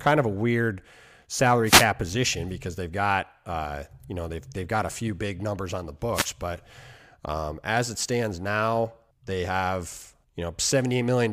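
A speech clip with two brief swishes of static, at 1.65 to 1.86 s just before "position because they've got", and at 6.13 to 6.28 s between "big numbers on the" and "but um as it". These are wireless microphone noise hits: the FM radio signal fades as reflections cancel, letting receiver noise surge over the voice.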